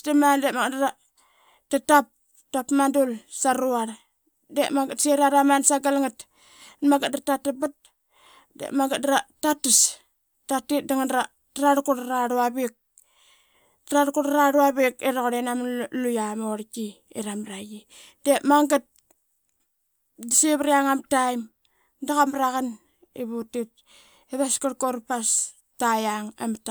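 The speech recording has no audible technical faults anywhere in its duration.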